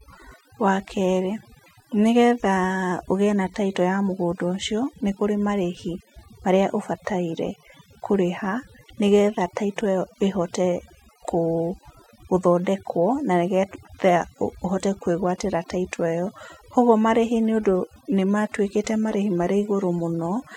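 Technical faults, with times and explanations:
Throughout: overdone noise removal. A noise reduction stage was set too hard, so any frequency band sitting close to its noise estimate is pushed down or switched off, taking the quieter parts of the speech with it. The background collapses into near silence dotted with twinkling specks. On a spectrogram the gaps look scrubbed black, with isolated bright dots and ragged, holed edges around the speech harmonics.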